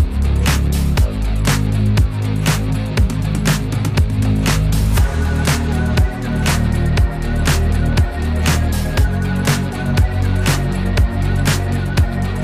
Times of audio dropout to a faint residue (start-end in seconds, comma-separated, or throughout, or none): none